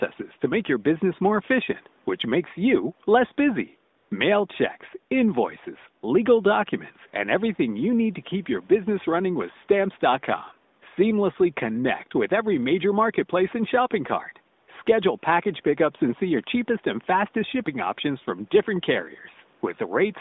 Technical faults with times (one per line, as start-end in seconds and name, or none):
3.98-4.10 AMR comfort noise
14.64-14.68 AMR comfort noise